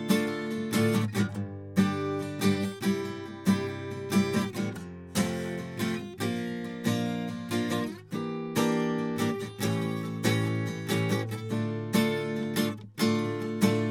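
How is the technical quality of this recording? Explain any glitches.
No technical glitches can be heard in this music recording. Nothing in the audio stands out as a fault that needs explaining.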